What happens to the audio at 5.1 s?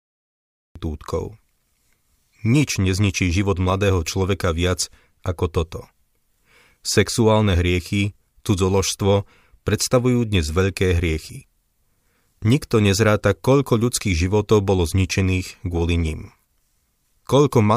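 Nothing goes wrong at 5.1 s: the speech there runs on without any dropout, click, glitch or other audible fault.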